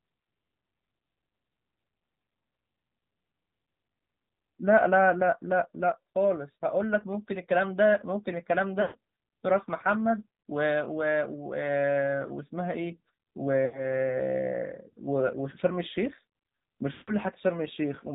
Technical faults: AMR narrowband mobile codec; lost AMR speech frames

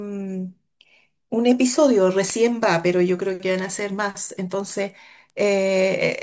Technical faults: resampler restarted on every block

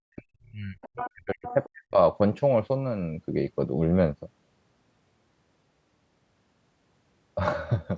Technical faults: speech suppressed in double talk; other side's voice leaking through

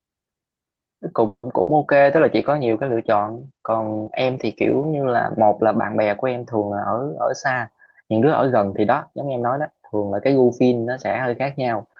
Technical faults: call audio freeze; burst of packet loss; call bitrate drop; jitter buffer speed-up

